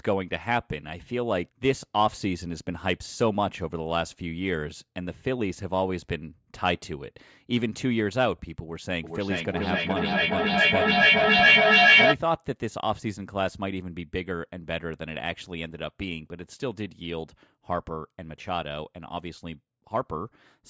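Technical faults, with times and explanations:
9.03–12.2 s feedback echo between two devices: a second device replays and re-captures the sound, returning it roughly every 400 ms and building to about 9 dB above speech instead of fading like reverb.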